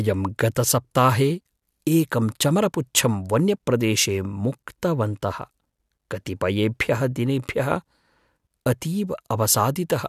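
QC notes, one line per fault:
No faults heard anywhere in this speech recording.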